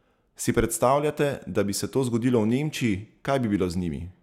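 Nothing here sounds broken: the speech comes through steady and intact, with no technical faults to point to at any moment.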